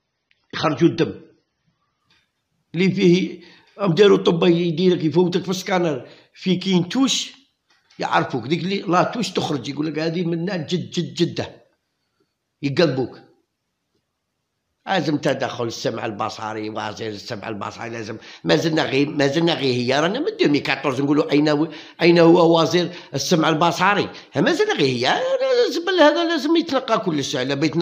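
An adaptive stream starting at a low bitrate shapes the first 2.0 s. Nothing above 6.3 kHz survives and codec artefacts are stronger, which points to roughly 24 kbit/s AAC. At 2.0 s the player steps up, apparently to about 96 kbit/s, and the treble returns abruptly without a gap.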